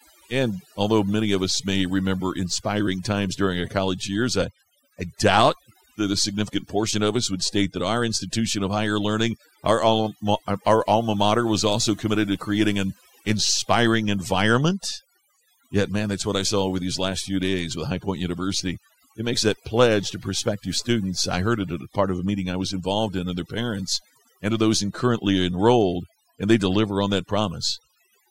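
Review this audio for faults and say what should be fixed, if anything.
Overdone noise removal runs throughout. The gaps between phrases drop to near silence dotted with twinkling specks. The speech loses its quieter parts, because they fell near the noise estimate and were cut out with the noise. Unlike low-bitrate codec artefacts, the damage gathers in pauses and soft endings. Set the noise reduction gentler, accepting a little residual hiss to keep the voice intact.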